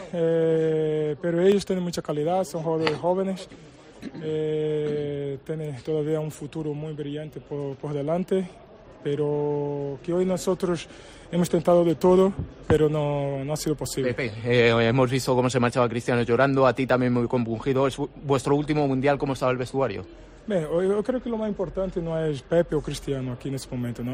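At 1.52 s the audio jumps forward, consistent with a dropped buffer (overrun), likely from samples being overwritten before the program read them. Roughly 5 ms of sound is missing, and the two sides join directly with no gap of silence.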